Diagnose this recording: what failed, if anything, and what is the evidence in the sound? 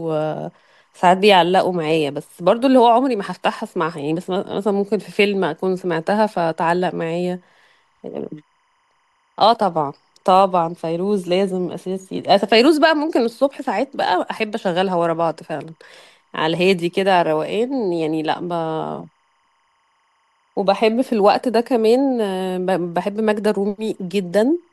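Timecode bleed is present for the full length of the speech, pointing to a fault in the analogue wiring. A faint, steady chirping warble runs behind the voice, alternating between tones near 1 kHz and 2 kHz, roughly 45 dB below the speech. Its rhythm fits 25 frame-per-second linear timecode. The code's square wave, carried on an adjacent track or cable, is coupling into the audio path through crosstalk or poor shielding.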